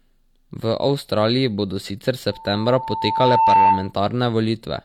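From 2.32 to 3.93 s, loudspeaker feedback squeal: the microphone-to-speaker loop exceeds unity gain at 893 Hz, and the tone builds over roughly 1.5 s to about 10 dB above the speech.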